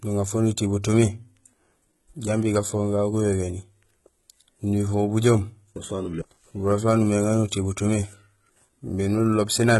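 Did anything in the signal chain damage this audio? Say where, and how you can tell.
Yes, at the codec stage. Throughout the speech, sibilants sound gritty and metallic, the treble is synthetic, and nothing lies above 11.8 kHz. This is likely HE-AAC compression, which rebuilds the upper band from copied lower bands; damage this heavy fits a bitrate around 16 kbps.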